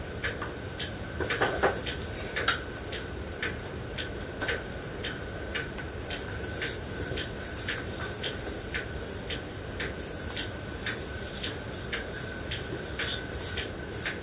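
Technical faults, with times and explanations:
No technical faults; the audio shows a call path's band limit with nothing above 4 kHz, consistent with G.711 mu-law at 64 kbps.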